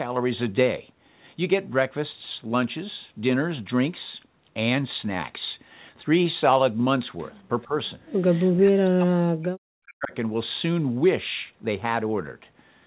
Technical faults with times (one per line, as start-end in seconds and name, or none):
7.65-7.75 speech suppressed in double talk
8.56-10.13 speech suppressed in double talk